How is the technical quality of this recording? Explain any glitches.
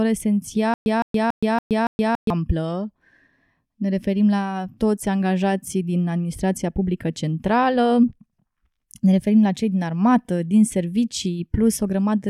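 The recording has one clear glitch. From 0.74 to 2.30 s there is a stutter with silent gaps: a 161 ms fragment repeats five times at a steady 282 ms period, each followed by about 121 ms of dead digital silence. This is likely a stalled stream replaying its last buffer on each retry. The even rhythm of identical bursts separated by true silence sets it apart from random dropouts, and the intended audio for that span is missing.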